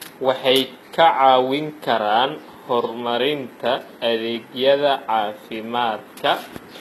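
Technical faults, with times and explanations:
throughout, HE-AAC compression: the treble sounds synthetic, with s sounds coming out gritty and metallic or lispy, and nothing is present above 12.4 kHz. The likely cause is a low-bitrate codec that encodes only the lower spectrum and rebuilds the top by copying lower bands upward under a coarse envelope, so the upper harmonics no longer match the real ones. The plainly audible damage fits a rate around 16 kbps.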